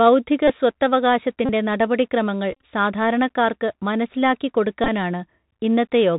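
The whole recording passes through the Bluetooth CVSD headset codec, at 64 kbps. The band stops at 4 kHz. Loud high sounds outrun the adaptive step and break up. S sounds turn scratchy. A granular hiss sits under the speech throughout.

Bluetooth headset packet repeats then come at 0.48 to 0.50 s, 1.46 to 1.50 s, 2.52 to 2.61 s and 4.84 to 4.89 s. Lost packets were replaced by the previous one. Each run buzzes near 267 Hz. The worst, about 68 ms spread over 105 ms, fits roughly 18 lost packets.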